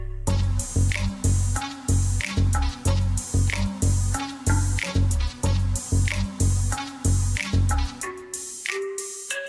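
No technical faults can be heard anywhere in this audio.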